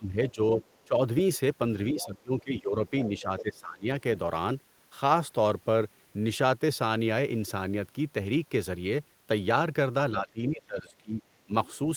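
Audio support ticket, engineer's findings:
Speech suppressed in double talk, three spots. 0.0–1.0 s: talker dips about 15 dB, roughly half a second affected. 1.92–3.88 s: dips about 20 dB, roughly 1.5 s affected. 10.12–11.53 s: dips about 15 dB, about a second affected. Likely component: echo canceller. It could not separate near talker from loudspeaker echo while both sides spoke, and attenuated both.

Other side's voice leaking through, three spots. 0.61–0.81 s: faint, about 25 dB below speech. 2.00–2.05 s: short scrap, about 20 dB below. 2.88–3.42 s: clearest, about 15 dB below. Likely component: echo canceller. Far-end loudspeaker audio reached the mic and was not fully removed. Leaks overlap the suppression windows.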